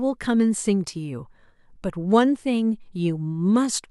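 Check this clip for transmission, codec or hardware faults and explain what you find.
Nothing in the speech signal points to a transmission, codec or hardware problem, as the audio stays continuous and stable with no audible disruption anywhere.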